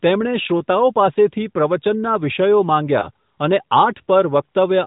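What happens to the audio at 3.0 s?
Right after "પાસેથી પ્રવચનનાં વિષયો", from 3.00 to 3.07 s, there is a lost AMR speech frame: a corrupted frame failed its check and the decoder repeated the last good pitch and vocal-tract settings at lower gain, producing a brief dip or warble consistent with a single missing 20 ms frame.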